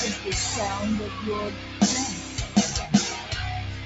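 A noise suppressor built for speech has been applied to this sound and stays active throughout. It treats sustained tones and decaying tails as noise. Their level rises and falls by around 10 dB, so the sound pumps and thins while sharp onsets pass largely untouched. The sound is also cut by the noise suppressor in two places, from 1.51 to 1.81 s and from 2.21 to 2.56 s. There the suppressor pulls the held sound down by about 6 dB more than its surroundings, and the sound audibly sinks before recovering. The call path limits everything to 8 kHz.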